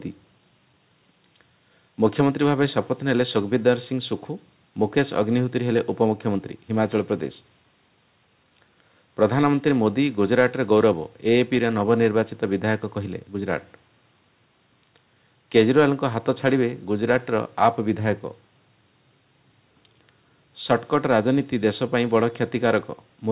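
The sender's audio clock runs faster than the receiver's, by something like 4 percent, so this is clock drift between sender and receiver. Because samples arrive slightly quicker than they are played out, the receiving jitter buffer keeps filling instead of holding a steady level, and the backlog has to be shed continually to keep latency from growing. The result is that the audio never settles into an even pace; small timing hiccups recur across the whole clip rather than at one spot. The shedding appears as repeated timing corrections from 0.20 s to 23.17 s, with playback effectively running at 104 percent. The receiver trims short pieces out of the stream, always in the same direction and at uneven intervals. These edits sit on top of the call path's G.711 mu-law coding, whose band limit leaves nothing above 4 kHz and whose fixed 64 kbps rate fits that codec.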